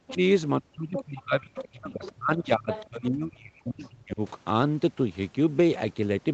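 Speech recorded through a call path, where the echo canceller appears to have mishandled moments when both ends talked at once. It likely failed to separate the talker from the loudspeaker echo and turned everything down, producing speech suppressed in double talk from 0.0 to 0.2 s and again from 0.59 to 4.21 s. The voice dips sharply, by up to roughly 40 dB, and drops out in pieces over about three seconds of the longer stretch. The same canceller also likely left part of the loudspeaker signal in the microphone feed, so the other side's voice leaks through at 0.08 to 0.17 s, 0.97 to 1.23 s, 1.55 to 1.65 s, 2.03 to 2.37 s, 2.71 to 2.85 s and 3.84 to 3.89 s. These scraps sit anywhere from about 10 dB to about 35 dB below the talker, loudest near 2.7 s and faintest near 3.8 s. Throughout, the sound carries the 8 kHz top end of the Opus call codec.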